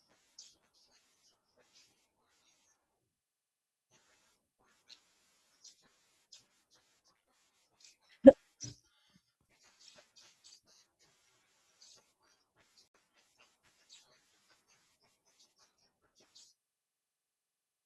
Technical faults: digital broadcast dropout

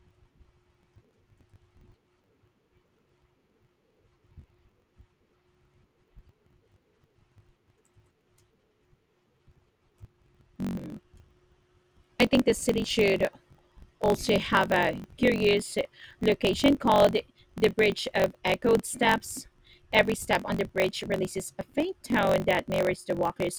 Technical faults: block size mismatch (truncated)

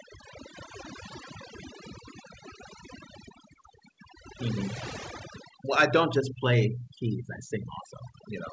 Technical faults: overdone noise removal

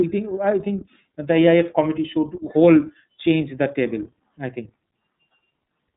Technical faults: iLBC codec

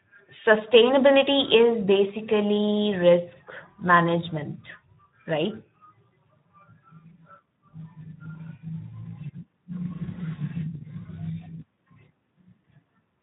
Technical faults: Speex codec

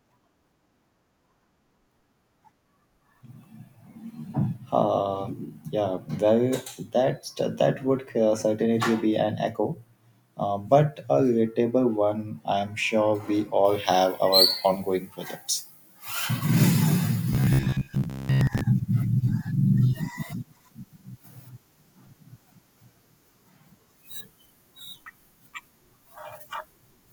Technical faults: pre-emphasis left on; robotic sound from repeated short buffers

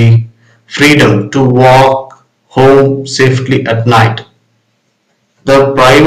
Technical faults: hard clipping

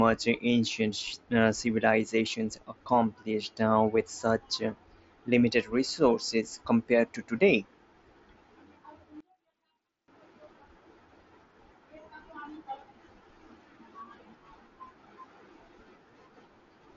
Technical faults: one channel inverted

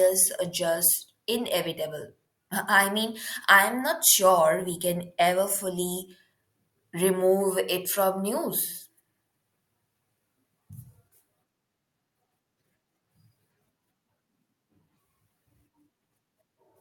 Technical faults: none

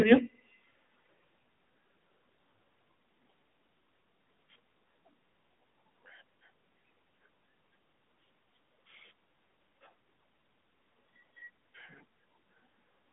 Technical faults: AMR narrowband mobile codec

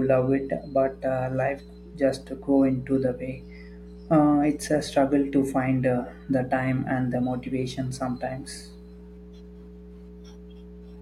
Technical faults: mains hum

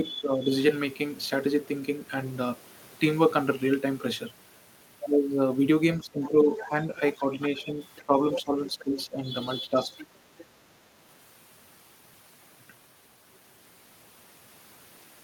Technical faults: speech suppressed in double talk; other side's voice leaking through

